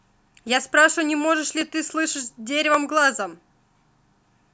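From 0.48 s to about 3.88 s, clicks recur roughly every 1.14 s, about four in all. These are clock drift buffer slips. Two clocks likely disagree by roughly 400 ppm. The buffer then drops or repeats a few samples each time.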